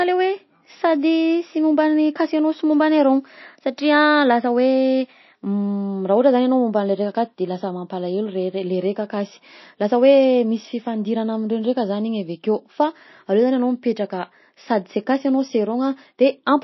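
A starved, likely MP3 compression encoder, consistent with roughly 26 kbps, cuts everything above 5.8 kHz throughout, leaving the speech dull, watery and swirly, with smeared consonant attacks.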